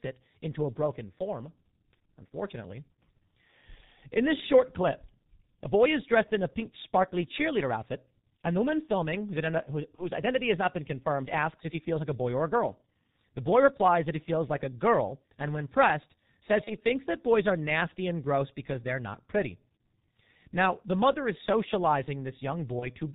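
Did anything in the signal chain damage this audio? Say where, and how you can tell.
Yes. The codec stage hurts it throughout: heavy G.723.1 coding cuts everything above 4 kHz and smears consonants, and the hoarse, muffled tone points to the 6.3 kbit/s mode.

On the network side there's VoIP packet loss concealed by the speech codec at 9.95–10.06, 16.64–16.73 and 22.79–22.87 s. Each gap turns into a buzzy tone or coloured noise that fades, which fits one lost 30 ms frame, and the sound stays weak briefly afterwards.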